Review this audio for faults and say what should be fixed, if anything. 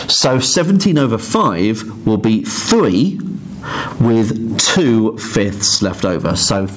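Gain pumping runs through the whole clip, most likely because the input gain is set far too high for the microphone and a fast compressor or limiter pulls the level down on every loud sound. The level swings by around 15 dB, so loud and quiet parts sit unnaturally close and the sound feels squashed. The call's microphone processing, which cuts the lowest bass and leaves nothing above 8 kHz, plays no part in this. To prevent it, lower the microphone gain at the source so the limiter rarely has to act.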